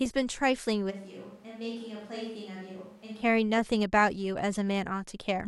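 From 0.92 to 3.2 s the speech suddenly turns roomy and thin, roughly 10 dB quieter with more background noise, likely a switch to a distant microphone.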